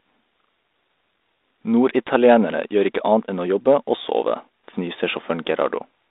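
No technical faults occur anywhere in the speech, so there is nothing to describe in time order.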